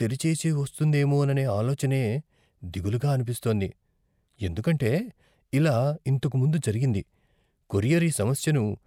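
At 2.64 s, for about 0.14 s, the speech breaks into DAB burbling: short blips of noise in single sub-bands. Bit errors at a rate of roughly 0.15 percent slipped past error correction and corrupted samples in the MP2 data, with around six frames affected. A longer burst of roughly nine frames follows from 4.99 to 5.21 s, just before "ఇలా ఇంతకు ముందు జరిగింది".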